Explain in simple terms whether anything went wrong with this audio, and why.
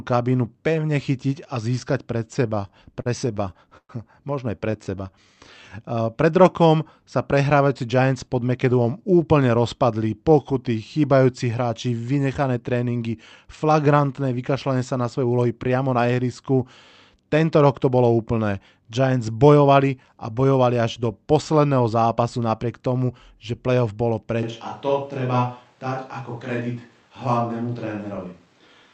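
Between 2.55 and 4.75 s the speech stutters and drags, catching 13 times, the longest hitch lasting about 0.12 s. These are repeated stalls (stutter): packets arrived late, the call's buffer kept running dry, and the receiver stretched the last sound to cover each wait.

From 4.84 to 5.70 s the speech slows to about 84% speed, drawn out but at the same pitch. This is a jitter buffer slow-down: with its reserve low, the receiver repeated tiny slices of sound, adding about 0.14 s to rebuild it.

The speech briefly sounds hurried, running about 10 to 12% fast at normal pitch, from 7.59 to 8.79 s, near 15.23, 19.39, 23.01 and 26.14 s, and from 28.18 to 28.83 s. Each is a jitter buffer speed-up: too much audio had piled up, so small slices were trimmed to reduce the delay.

From 24.43 s to the end the sound suddenly turns roomier and hollower, a bit quieter, with more background noise. This is a switch to a distant microphone, likely because the close microphone's signal dropped out and one farther away took over.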